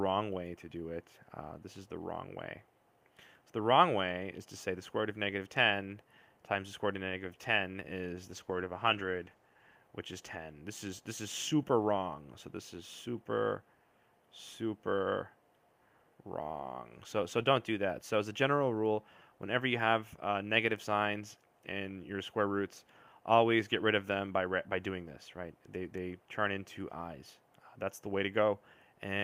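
The audio is a call recording with a call bitrate drop from 8.31 s to 9.83 s. The call's bandwidth estimate fell, so the encoder had far fewer bits to work with. The sound turns rough and watery, and it loses clarity. The degradation fits a fall from about 40 kbps to about 15 kbps. It stays at its worst for about 1.46 s. Then the bitrate recovers and the sound clears.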